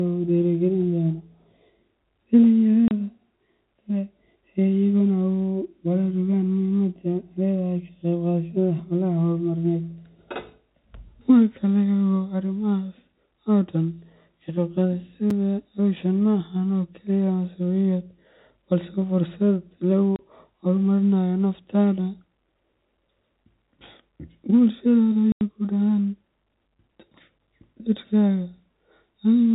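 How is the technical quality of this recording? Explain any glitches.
It's a phone-band recording with a few audible dropouts. The G.711 telephone coding keeps everything under 4 kHz, and four short holes interrupt the speech.

At 2.88, 20.16 and 25.32 s you get packet loss filled with silence: lost packets were replaced by nothing, leaving 30, 30 and 90 ms hard-edged gaps, which fits 30 ms packets.

At 15.30 s there's a block of digital silence, about 5 ms of zeros, likely from an unfilled 256-sample buffer, heard as a tick or dip.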